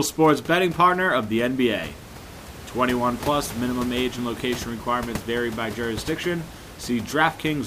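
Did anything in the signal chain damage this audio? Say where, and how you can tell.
No, the signal chain is undamaged.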